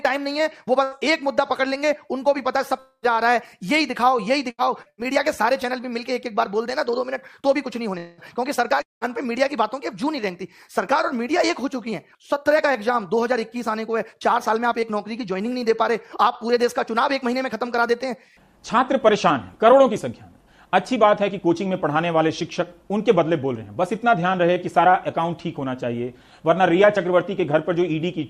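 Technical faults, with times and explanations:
0.83–0.94 s, 4.50–4.61 s and 4.90–5.01 s, burst of packet loss: each time about 80 ms of audio never arrived. The receiver extended the last sound for roughly that long, letting it fade as a held buzz or hiss, then resumed with that stretch skipped.
4.82–4.89 s, short concealed packet loss: about 40 ms went missing, just before the third burst. The decoder bridged it with roughly 34 ms of continued sound, then blended back into the real signal. The result is a brief smear or wobble rather than a clear gap.
2.79–3.05 s, 7.98–8.21 s and 8.82–9.04 s, long network dropout: each time a stretch of about 200–240 ms failed to arrive, likely an interruption in the network link. A fading continuation of the last sound covers most of each stretch. At 2.79 s it trails into about 70 ms of silence, and at 8.82 s into about 170 ms. The audio then resumes further on without the lost part.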